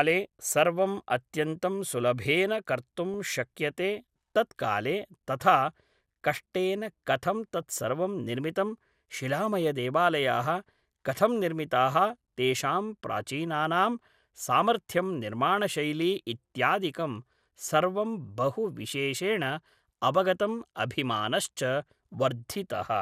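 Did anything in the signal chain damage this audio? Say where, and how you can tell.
Yes. DAB burbling at 3.14 s and again from 7.62 to 7.89 s, in the codec stage. Weak reception let a small fraction of bit errors slip past error correction into the MP2 data. Corrupted samples put short blips of noise into single sub-bands over the speech.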